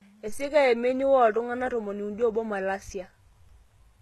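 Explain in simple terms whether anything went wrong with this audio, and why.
Likely HE-AAC compression, heavy, throughout the speech: nothing above about 12.3 kHz remains, and treble rebuilt from copied lower bands makes s sounds gritty.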